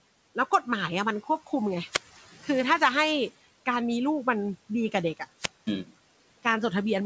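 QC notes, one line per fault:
1.89–2.21 s and 5.35–5.76 s, wireless microphone squelch dropout: the radio link from the analogue FM microphone faded twice, and each time the receiver's squelch closed and muted its output. Each event starts with a short swell of hiss or static as the carrier weakens, then a hole of near silence lasting about 190 ms and then about 215 ms, before the speech returns.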